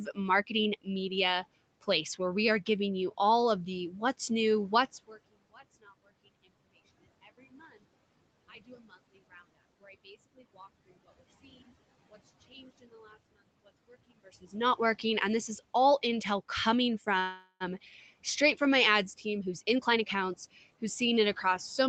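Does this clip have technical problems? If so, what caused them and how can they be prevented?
Yes. A call audio freeze occurs from 17.19 to 17.63 s, between "is all intel coming" and "straight from my ads". Packets were likely delayed in transit, so the jitter buffer ran dry. The receiver stretched the last sound into a fading buzz for about 0.41 s, ending in roughly 80 ms of silence. The audio then resumed where it stopped, losing nothing but arriving later. A steadier network path or a larger jitter buffer target prevents this.

A jitter buffer speed-up follows from 19.25 to 21.47 s, starting just after "straight from my ads". The held-up packets arrived together, leaving the buffer with more audio than it wanted. To cut that delay, the receiver repeatedly removed short pitch-period-sized slices, about a fifth of a second in total. As a result, the speech runs at 110% speed at unchanged pitch and sounds hurried. 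Preventing the preceding delivery stall, or draining excess buffer more gradually, avoids this.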